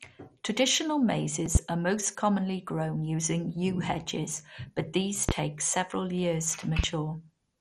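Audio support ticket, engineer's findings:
MP2 compression, full clip: dull, gurgling, granular texture on the speech with flickering highs. Nothing above 14.4 kHz. Likely MPEG Layer II at a starved bitrate, consistent with roughly 56 kbps. Upper sub-bands drop in and out, and the remaining bands are coarsely quantised. Heavy codec damage.

Loud pop, 1.55–1.59 s: single sharp pop, about 20 dB over the speech, which continues underneath. Likely a voltage transient from a connector, switch, static or driver glitch, shaped by downstream circuitry.
Loud pop, 5.29–5.32 s: single pop, about 20 dB above the signal, same character.
Loud pop, 6.79–6.87 s: double pop in quick succession, about 15 dB over the speech.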